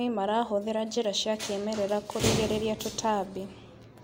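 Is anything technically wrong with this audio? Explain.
No, nothing technically wrong can be heard in this speech recording. No fault needs explaining here.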